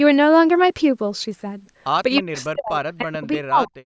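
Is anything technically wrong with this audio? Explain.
Yes. From 2.16 to 2.2 s a faint copy of the speech arrives 314 ms late, about 20 dB down. This is likely an echo leak, a single discrete repeat rather than diffuse reverb.

From 2.19 to 2.84 s and from 3.01 to 3.87 s the speech dips in pieces, by up to roughly 40 dB. This is likely speech suppressed in double talk: the canceller ducks its own talker along with the loudspeaker echo while they overlap, unlike random packet dropouts.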